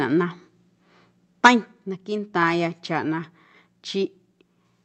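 From 1.44 to 1.49 s, the loudest peaks turn harsh and crackly. Their tops sound flattened, pushed about 6 dB past the ceiling. Only a small share of the samples in that stretch are cut. This is microphone overload. The likely cause is an input level set too high, so the converter ran out of headroom. The crackle sits on top of the sound, not behind it.

At 1.47 s, right inside that distorted burst, the whole signal steps down by about 4 dB. Foreground and background fall together, in one jump rather than a fade. This is the microphone volume stepped down, likely with the input gain lowered in a single move after the clipped peak. The sound stays at the lower level afterwards. The call path's band limit, which fits a cut-off near 8 kHz, stays the same across the step.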